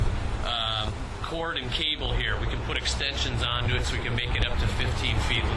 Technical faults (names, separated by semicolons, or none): resampler restarted on every block